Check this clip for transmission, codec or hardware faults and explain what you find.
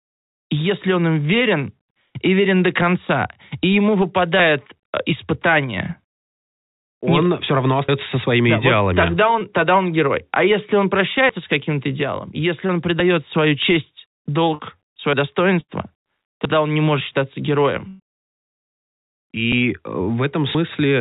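The clip has three kinds of fault: dropped buffers, short concealed packet losses and two bursts of packet loss, all heard over the narrowband call sound, which has nothing above 4 kHz.

Dropped buffer (overrun) at 7.89, 11.29, 13.0, 15.13, 16.45 and 19.52 s: samples were likely overwritten before being read, so the speech jumps ahead, roughly 100 ms at 7.89 s and about 40 ms elsewhere.

Short concealed packet loss at 9.39, 12.67 and 14.55 s: 20 to 40 ms never arrived, and the decoder extended the preceding sound, giving a brief smear or wobble.

Burst of packet loss at 15.61 s (80 ms) and 17.88 s (120 ms): consecutive packets went missing, so the last sound is held and fades as a buzz or hiss before the speech resumes further on.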